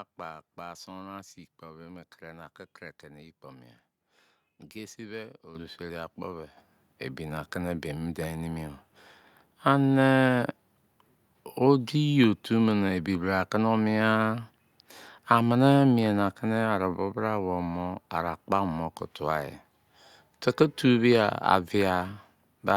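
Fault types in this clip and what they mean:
microphone volume stepped up: the microphone's input gain jumped in single steps, lifting speech and background together by about 10 dB at 5.55 s and about 7 dB at 6.57 s; the waveform widens abruptly and the spectrogram brightens across all frequencies at each step.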